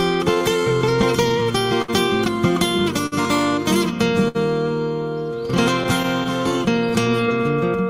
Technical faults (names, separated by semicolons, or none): clock drift between sender and receiver; repeated timing corrections; short stall from a late packet; scattered short gaps